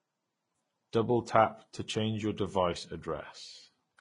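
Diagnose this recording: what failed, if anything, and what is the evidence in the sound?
The codec stage failed, throughout the speech, with transcoding between lossy codecs the likely cause. A spectrogram shows a hard ceiling at 10.5 kHz, and two different artefact textures overlap, consistent with low-rate HE-AAC re-encoded as Vorbis, which stacks both coders' errors.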